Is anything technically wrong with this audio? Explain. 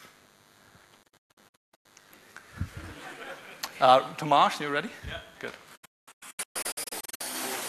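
Yes, two things. There's a DECT cordless phone buzz running the whole way through: a DECT handset or base nearby fires a radio burst every 10 ms, the audio circuitry rectifies it, and you get a thin, steady 100 Hz buzz full of harmonics, sitting roughly 35 dB under the audio.

There's also a digital broadcast dropout, twice. From 1.03 to 1.86 s the receiver keeps losing good frames and muting, with quick 8 ms fades punching scattered holes totalling about 0.55 s, the longest 168 ms. From 5.75 to 7.21 s it's worse: about 0.82 s gone in bits, longest gap 216 ms. Whatever was sent during those holes is simply lost.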